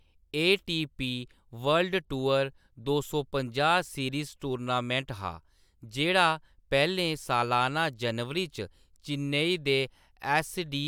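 Nothing goes wrong anywhere in this bit of speech, so there's no technical fault to point to at any moment.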